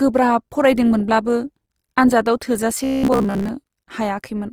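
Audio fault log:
Throughout: Opus compression. Tones sound grainy and rough with plainly audible codec damage, most likely from Opus music-mode coding at a rate near 24 kbps. On a spectrogram, bands look noise-filled and smeared, but full bandwidth remains.
2.75 to 3.49 s: robotic sound from repeated short buffers. The sound turns into a rigid metallic buzz at 66.8 Hz, likely because a roughly 15 ms stretch is replayed in place of most of the incoming audio. The waveform shows identical repeating cycles, and the spectrogram shows evenly spaced harmonic lines.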